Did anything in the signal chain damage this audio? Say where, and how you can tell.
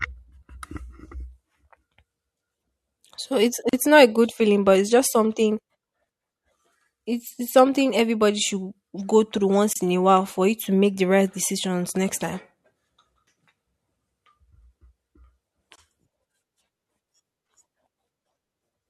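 Yes, at the codec stage: a gap at a join of encoded pieces. Silences open at 3.69–3.73 s (39 ms), 9.73–9.76 s and 15.76–15.78 s (24 ms each), exactly 6.0 s apart, where untrimmed encoder delay and end padding survived. Unlike a dropout, speech resumes where it stopped.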